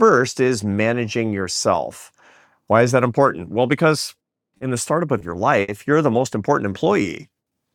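Three short stalls from a late packet occur at 4.57, 5.18 and 5.62 s. Each time the buffer ran dry, and the last sound was held for 30, 20 and 60 ms before resuming exactly where it stopped. These are brief single freezes, not a gradual drag.

A jitter buffer slow-down runs from 6.69 to 7.66 s. Repeated pitch periods add about 70 ms, so playback runs at 94% speed with unchanged pitch. The sound is drawn out across the span, unlike one abrupt hold.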